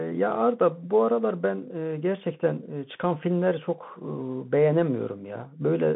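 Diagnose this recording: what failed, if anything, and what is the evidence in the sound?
Throughout, the speech is muffled and narrowband, with nothing above 3.8 kHz, scratchy s sounds and granular hiss. This points to a Bluetooth CVSD headset codec stage, whose adaptive one-bit steps lag loud highs.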